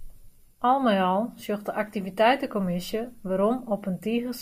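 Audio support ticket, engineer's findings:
No faults found on this speech.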